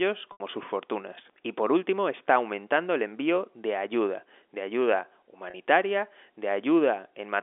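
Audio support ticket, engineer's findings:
Packet loss with pitch repetition at 0.32–0.40 s: last pitch period looped, fades toward silence, cross-fade back in; 80 ms gap fits four 20 ms packets. At 5.50–5.54 s: 40 ms hole, brief held buzzy note. Jitter buffer or concealment stage; G.711 line band clean.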